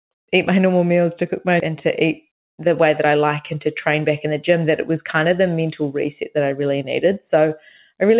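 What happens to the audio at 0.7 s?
Nothing goes wrong at 0.7 s; the speech passes through intact there.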